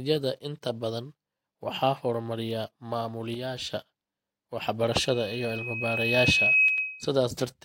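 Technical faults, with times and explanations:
3.34–3.74 s and 6.68–6.78 s, one channel drops out: the speech suddenly loses about 6 dB and then returns at full level, the first dip lasting 0.39 s and the second 0.1 s. The likely cause is one stereo channel going silent, which halves everything common to both sides in the mono sum. On a waveform, the envelope abruptly shrinks to about half its height with vertical edges, and on a spectrogram the whole band dims evenly for that span.
4.92–7.09 s, loudspeaker feedback squeal: a steady 2.5 kHz tone rises over about a second and a half to roughly 10 dB above the speech and holds until it cuts off at 7.09 s. This happens when a microphone hears the loudspeaker it drives and the loop gain at that frequency exceeds one, so the tone keeps reinforcing itself. On a spectrogram, it appears as a single bright horizontal line that brightens steadily. 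On the waveform, the envelope swells and stays fat.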